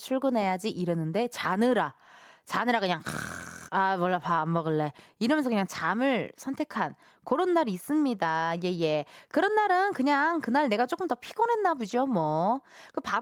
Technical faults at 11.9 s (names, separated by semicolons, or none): lost packet rebuilt from error correction